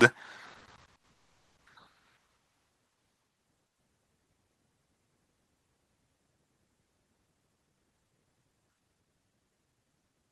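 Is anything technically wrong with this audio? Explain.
Yes. The speech has three kinds of timing fault.

First, two short stalls from a late packet, at 0.59 to 0.64 s and 0.97 to 1.06 s. Each time a packet arrived late and the jitter buffer ran dry. The receiver stretched the last sound to cover the wait, for 20 ms and then 60 ms. The sound hangs briefly with a faint buzz or dip. Nothing is lost. The speech simply resumes a little later.

Next, a call audio freeze from 1.11 to 1.59 s. The receiver filled about 450 ms. The last sound carries on as a fading buzz or hiss, then drops to silence for about 330 ms. The speech then picks up exactly where it stopped, so nothing is missing. The likely cause is packets held up in transit, which emptied the jitter buffer for much longer than the stalls did.

Last, a jitter buffer speed-up from 7.30 to 9.94 s. The buffer held more audio than it aims for, so the receiver cut the extra delay. 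It trimmed many tiny pieces, each a pitch period or a few, removing about half a second in all. The speech runs at 117% speed, and the pitch does not change. It sounds hurried.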